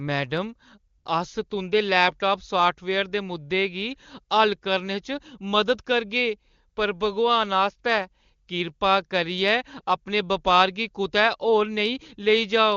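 At 0.97 s, AMR comfort noise takes over for 80 ms, until 1.05 s. The phone treated the talker as silent and stopped sending speech frames. The receiver filled the gap with synthetic noise, so the real background briefly gives way to a smooth, steady hiss.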